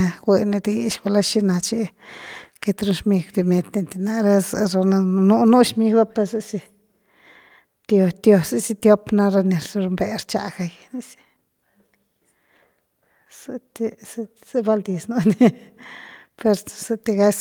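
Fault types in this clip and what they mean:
No fault of any kind can be heard in this speech recording. Nothing in it calls for a line of its own.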